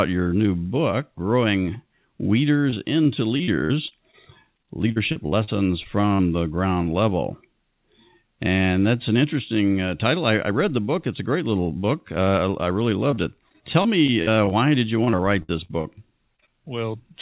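Choppy, robotic speech with bits chewed out runs from 2.7 to 4.15 s, 4.57 to 6.21 s, 13.11 to 14.53 s (after "I I really", ending before "did you") and 15.05 to 15.86 s (right after "did you"). This is repeated packet loss: gaps of up to about 60 ms keep arriving close together, and each is filled by stretching the previous sound.

Three brief smears follow at 16.36, 16.40 and 16.46 s. These are short concealed packet losses, roughly 20 ms holes patched from the preceding audio before the real signal blends back. The narrowband sound, with nothing above 4 kHz, fits a G.711 call path.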